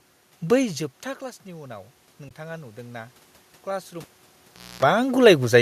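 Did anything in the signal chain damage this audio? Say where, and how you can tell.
Yes. The call processing's automatic gain control rose from 0.55 to 3.09 s. After the level fell by about 15 dB as the talker moved back, the gain crept up about 4 dB, so the voice and room noise swell together.

At the codec, AAC frame loss with muting left a soft-edged hole from 2.29 to 2.31 s. The decoder zeroed the missing spectrum, and its overlapping windows faded the sound out and back in around a 20 ms gap, which fits two lost frames.

In the analogue wiring, the cable was pulled and plugged in between 4.02 and 4.83 s. A pop opens about 0.76 s of near silence, then a 60 Hz mains buzz lasting about a quarter second while only the tip touched, and a second pop as the sound returns.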